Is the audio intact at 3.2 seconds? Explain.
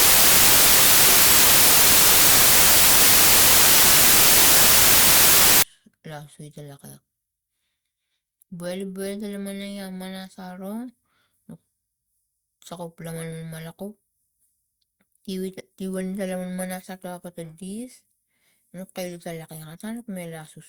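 No, at 3.2 seconds you're inside a stretch of samples built from the wrong bytes, running from 0 to 5.63 s. The bytes of each sample get assembled wrongly, so the jittery low bits end up dominating, and the speech turns into loud, harsh noise close to white on the louder sounds.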